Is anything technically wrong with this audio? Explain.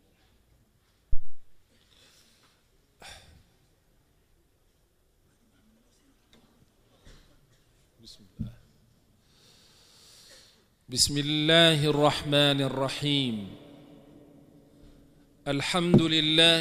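Yes, there's a phantom power thump from 1.13 to 1.46 s: a supply step kicking through the coupling capacitors, giving a deep thud peaking about −9 dBFS that dies away within roughly 74 ms.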